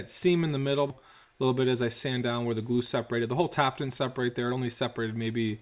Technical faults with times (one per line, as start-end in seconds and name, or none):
0.90-0.92 skip ahead
1.02-3.44 jitter buffer speed-up
3.86-5.46 jitter buffer speed-up